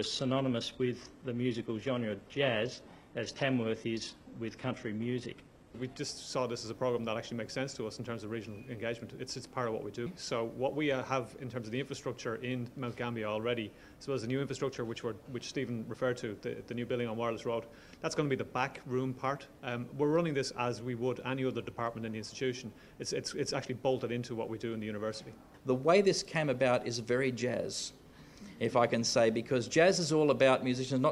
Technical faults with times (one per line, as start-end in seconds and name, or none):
0.00-6.00 adaptive stream starting at a low bitrate